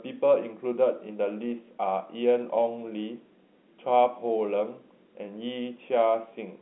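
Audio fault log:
The speech comes through G.711 telephone coding, consistent with 64 kbps A-law, with the line band running from 250 Hz to 3.5 kHz, nothing above 3.9 kHz, and no fault audible.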